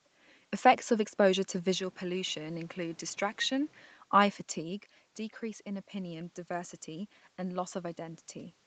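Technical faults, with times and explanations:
1.79 to 3.83 s, input switched to a poorer device: the sound turns duller and about 5 dB quieter with no gap at the switch. Nothing passes above 7.6 kHz, and a new noise floor sits roughly 30 dB below the voice. A likely change to a narrower-band microphone explains this.
5.40 to 8.64 s, automatic gain rising: the level at the microphone drops by about 11 dB, and the gain control slowly pushes back by about 3 dB. Voice and room noise swell together over several seconds. The recovery stays well short of the original level.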